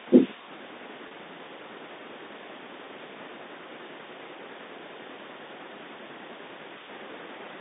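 Packet loss with pitch repetition occurs at 1.08 s and lasts until 1.11 s. About 30 ms of speech went missing, which fits a single lost packet. The receiver covered the hole by looping the last pitch period it had received. Because the gap is so short, the concealment never fades into silence. It is heard as a brief held, slightly buzzy tone before the speech picks up again.

A DC step arrives at 5.02 s. The waveform's zero line jumps to a new offset and stays there until the clip ends, with no step back and no decay. The shift itself carries no audible pitch. Its onset comes through as a single low thump or click, and the speech continues unchanged through the telephone-band channel of about 250 Hz to 3.7 kHz.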